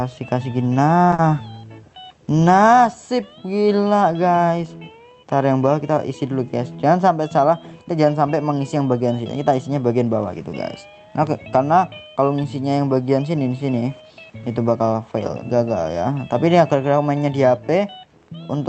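From the start and throughout, a video or display buzz sits under the audio: a 75 Hz field-rate hum with harmonic hash above it, roughly 40 dB below the signal, from a screen or video cable coupling into the audio wiring. A spectrogram shows a steady comb of horizontal lines at multiples of 75 Hz.

From 1.14 to 1.20 s comes a short concealed packet loss. About 40 ms of audio never arrived in time, and the decoder filled the gap by extending the preceding sound before crossfading back. It is heard as a brief smear or wobble. The spectrogram shows smoothed, blurred detail rather than a silent hole, all below the call path's 8 kHz upper limit.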